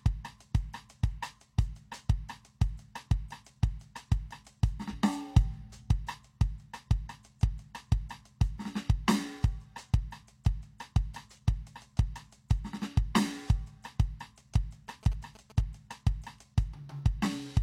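At 4.88 to 4.94 s there's a brief disruption in the music. That's damaged data in a compressed stream: corrupted bytes threw the decoder off, it lost frame sync and jumped ahead to the next clean header.

Later, from 14.88 to 15.61 s, you get that galloping dit-dit-dit of short buzzes at about 217 Hz, sitting roughly 20 dB under the music. Classic GSM signalling bursts: a nearby 2G phone pinging the network, and the circuitry rectifying the radio bursts into sound.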